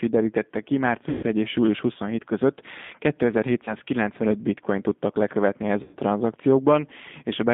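Speech carried over a G.729 codec line at 8 kbit/s, with plainly audible damage: the band runs only from about 200 Hz to 3.6 kHz, and the rough, slightly synthetic texture from pulse-coded excitation sets it apart from a plain band-limited telephone line. VoIP packet loss concealed by the speech codec occurs at 1.09–1.24 s, 3.65–3.74 s and 5.83–5.97 s. Each time, the decoder stretches the last sound into a fading buzzy tone or coloured noise rather than leaving a clean gap or a click, and the sound stays weakened briefly after each dropout. The lost audio spans roughly 140, 20 and 100 ms, which fits losing several 20 ms packets, one, and then several again.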